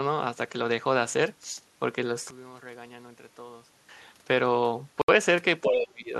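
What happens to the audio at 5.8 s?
The speech drops sharply from 5.63 s to 6.11 s, falling by roughly 25 dB at its deepest. This is speech suppressed in double talk. The echo canceller likely mistook this talker for loudspeaker echo while both sides spoke, and turned the signal down.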